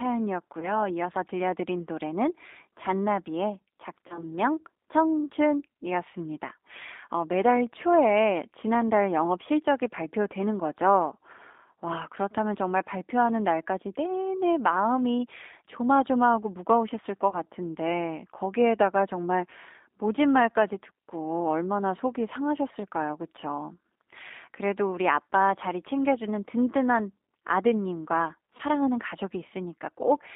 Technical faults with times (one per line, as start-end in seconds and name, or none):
0.00-30.35 G.729 codec
0.60-0.86 VoIP packet loss concealed by the speech codec
4.08-4.33 VoIP packet loss concealed by the speech codec
17.30-17.36 VoIP packet loss concealed by the speech codec
28.57-28.62 VoIP packet loss concealed by the speech codec